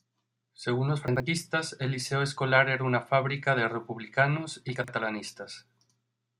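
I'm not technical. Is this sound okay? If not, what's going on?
No. Chunks out of order at 1.08 to 1.2 s and 4.76 to 4.88 s, the second right after "fábrica de republicanos y". A 40 ms slice of speech arrived late and played two slices after its proper place, giving a brief jumbled stutter.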